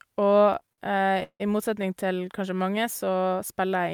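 From about 0.45 to 1.42 s the speech hits repeated stalls, a proper stutter. Packets arrived late, the jitter buffer kept running dry, and eighteen times the receiver stretched the last sound to cover, the longest for 165 ms. Nothing's lost, but about 40 percent of that stretch is filler, so it drags.

Then from about 2.84 to 3.57 s there's a jitter buffer slow-down. The buffer was building up a reserve by repeating tiny pitch-period slices, adding 68 ms, so that bit plays at about 92 percent speed with the pitch unchanged, sounding slightly drawn out.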